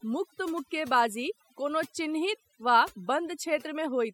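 Overdone noise removal runs throughout the speech. A noise reducer set too strong pulls down or mutes individual frequency bands whenever they sit near its noise estimate, taking quieter parts of the voice along. Pauses fall to near silence with twinkling specks.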